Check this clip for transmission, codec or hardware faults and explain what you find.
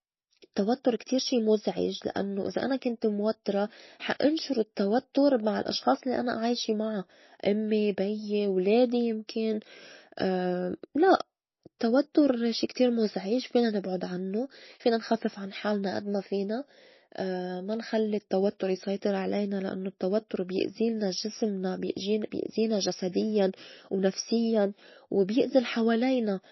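One codec fault runs through the whole clip. Throughout, the speech sounds watery and swirly, with nothing above 5.8 kHz, likely from low-bitrate MP3 compression near 24 kbps. The swirl distinguishes it from a clean low-pass filter.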